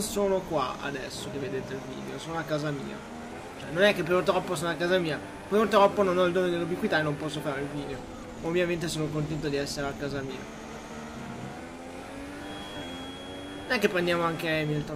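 A feedback whistle appears at 12.34 s and lasts to the end. It is a thin, steady tone at 3.3 kHz, sitting roughly 20 dB under the sound and swelling and fading slowly in level. The likely cause is a loudspeaker-to-microphone loop held just short of runaway feedback.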